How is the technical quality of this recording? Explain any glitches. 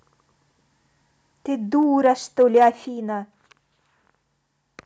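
The recording has two level problems in the speech: abrupt drops in input level and brief clipping on loud peaks.

Microphone volume stepped down: at 1.83 s the whole signal, voice and background together, falls by about 2 dB in one step, and at 2.85 s it falls again by about 5 dB. The cause is likely the call software detecting an input that was too hot and cutting the device's microphone volume in a single jump. There is no gradual fade, so the level change is sudden.

Microphone overload: from 2.05 to 2.07 s the peaks go about 1 dB past the converter's limit, and from 2.4 to 2.68 s they go about 2 dB over, with a few percent of samples flattened in each case. The likely cause is an input volume set high enough for the waveform tops to hit the converter's ceiling. The clipped peaks sound harsh and crackly on the loudest syllables, and the second stretch is longer.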